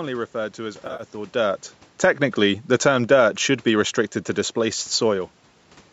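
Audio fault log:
0.85–1.03 s, AAC frame loss with concealment: Right after "referred to as", about 100 ms drops out in short bursts. The decoder patches each gap from earlier spectrum, giving a smeared, phasey patch.
1.36–3.15 s, automatic gain falling: The gain control judged the input too loud, or its background noise too strong, and eased the level down by about 3 dB, sinking before "should be restricted to".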